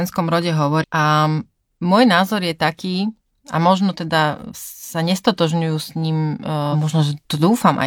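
Speech with two brief glitches, at 0.79 to 0.84 s and 6.69 to 6.76 s, caused by damaged data in a compressed stream that desynchronised the decoder.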